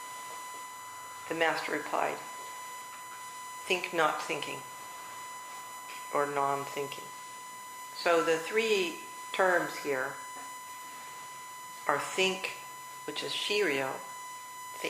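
Throughout, a USB whine sits under the sound: a fixed 1 kHz tone, only about 10 dB below the signal. The bus draws current in 1 ms frames that leak through power or ground, so unlike mains hum it sits at 1 kHz, not 50 or 60 Hz.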